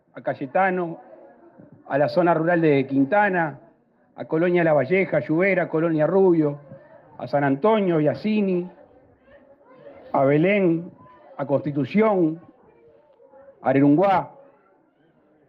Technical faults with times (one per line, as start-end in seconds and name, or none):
none